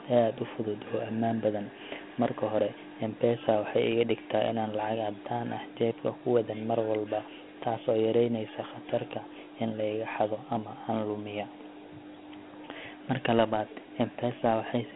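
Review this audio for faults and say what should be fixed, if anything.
Dialogic VOX ADPCM runs throughout the speech. Each sample is stored as a 4-bit step relative to a running prediction, and the coarse steps leave a gritty hiss that rides on the speech and follows its level. The damage is plainly audible, and the character fits a 32 kbit/s stream. The sound sits in a telephone band of roughly 150 Hz to 3.4 kHz, with nothing above 3.9 kHz. To prevent this, record and keep a linear PCM master, and make VOX copies only for playback systems that require them.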